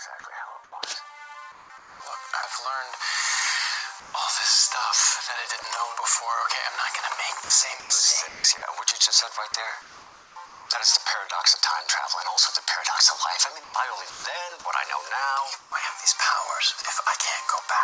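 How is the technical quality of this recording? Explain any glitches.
The recording has several glitches, all pointing to a voice detector switching transmission on and off. The audio stops at 8 kHz, which fits a G.722 call codec at 64 kbit/s.

Sound dropped by the voice detector occurs at 0.20 to 0.24 s, 5.62 to 5.64 s and 16.82 to 16.84 s. In each case a brief piece of sound vanishes into flat noise for about 20 to 40 ms. The likely cause is that the sender judged that sound to be background and briefly stopped sending. Unlike chopping, each dropout is a single isolated gap.

Comfort noise in place of the background runs from 0.20 to 2.00 s, 4.00 to 4.14 s and 15.60 to 16.84 s. At points within these stretches the real background gives way to steady, featureless hiss. Around 4 s that hiss sits about 2 dB quieter, against a background about 21 dB below the loud parts. The likely cause is the receiver synthesising noise while the sender paused. 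The sound itself is not lost here. Only the texture of the background is.

Sound chopped by the voice detector spans 7.44 to 10.70 s and 13.64 to 14.24 s. Here the audio repeatedly cuts in and out. About 1.1 s and 0.24 s of sound are replaced respectively. The likely cause is the detector toggling more than once within the stretch, and that repeated switching is what distinguishes chopping from a single dropout.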